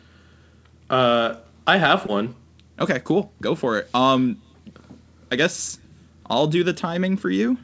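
At 2.06 s, running to 2.10 s, there is a short concealed packet loss. About 20 ms of the call arrived too late for the decoder, so the receiver synthesised roughly 22 ms of replacement, extending the preceding sound and then cross-fading back into the real signal. It comes through as a brief smeared wobble rather than a hole. That is what separates it from a plain dropout, which would leave a gap of silence or a hard click. The speech is carried over a call path whose band stops at 8 kHz, which fits G.722 at 64 kbps.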